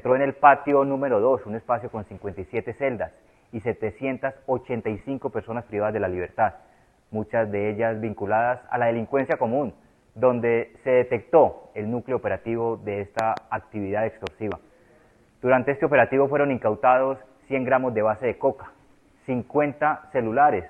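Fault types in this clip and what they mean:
Loud pop: two double pops, at 13.19 to 13.39 s and 14.27 to 14.54 s, peaking roughly 15 dB and 10 dB above the sound, which carries on beneath them. Likely a voltage spike from a plug, switch, static or driver glitch.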